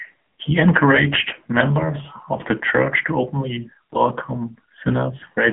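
The speech has been passed through the AMR narrowband mobile codec at a low bit rate, which fits the 6.7 kbps mode, and the damage is heavy throughout. The band is squeezed to roughly 150 Hz–3.4 kHz with nothing above 3.7 kHz, so the voice sounds thin, buzzy and synthetic.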